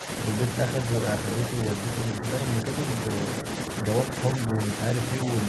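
Speech with brief level dips at 0.00–0.08, 2.11–2.24, 3.42–3.46 and 4.47–4.59 s, roughly 10 dB at the start and around 5 dB later. These show as narrowed waveform envelopes and fainter spectrogram bands, likely speech suppressed in double talk: an echo canceller ducking overlapping speech.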